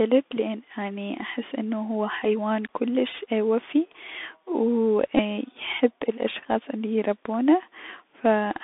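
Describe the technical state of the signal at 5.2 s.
A Bluetooth headset packet repeat occurs at 5.17 to 5.20 s: about 15 ms of lost voice packets, roughly four, were replaced by replaying the last packet, producing a brief buzz near 267 Hz. Underneath, the Bluetooth CVSD headset codec confines the line to about 200 Hz to 3.6 kHz, adding granular hiss and scratchy, slope-limited sibilants.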